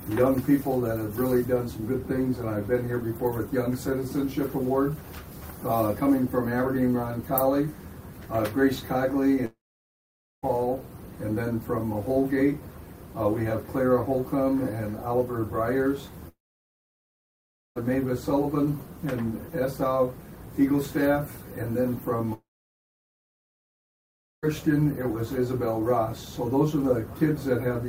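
The link likely stopped delivering packets for long stretches, causing a long network dropout at 9.45–10.45 s, 16.29–17.78 s and 22.34–24.45 s. Each time, a brief fading buzz or hiss trails off into silence (about 0.9, 1.4 and 2.0 s), then the sound resumes with that portion missing.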